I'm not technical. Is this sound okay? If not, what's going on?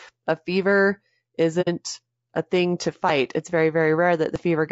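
No. The voice sounds rough and grainy throughout. Plainly audible low-delay AAC compression, the kind used in video calls, is the likely cause. At 1.61 to 1.68 s, the sound briefly fades into a short silent hole. That is AAC frame loss with muting: pieces of audio went missing, and the player filled them with silence.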